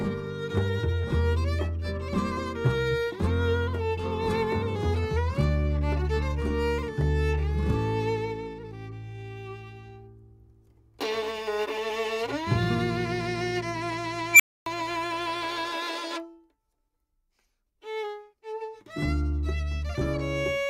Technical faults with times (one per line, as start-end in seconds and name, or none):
14.32-14.66 unstable filter